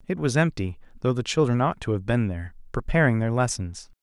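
No technical faults can be heard in this recording.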